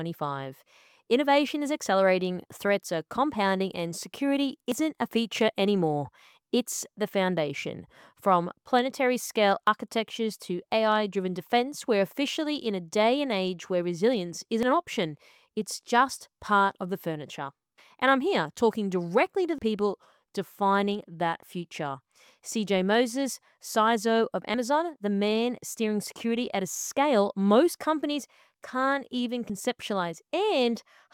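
Short skips land at 4.72, 9.67, 14.63, 19.58, 24.54 and 29.50 s, about five seconds apart, each dropping roughly 40 ms with the two sides butted together. This is audio missing between chunks, likely lost as the recorder closed each five-second chunk and opened the next.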